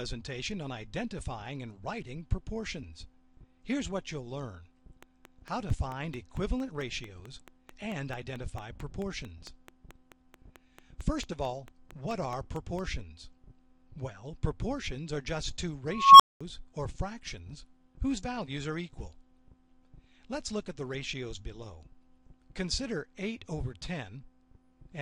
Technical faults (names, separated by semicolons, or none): train of clicks; unstable filter